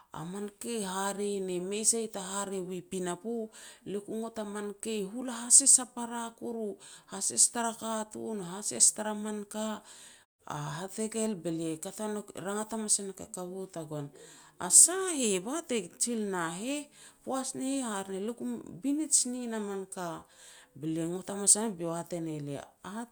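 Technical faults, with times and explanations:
No technical faults are heard in this speech, so there are no times or explanations to give.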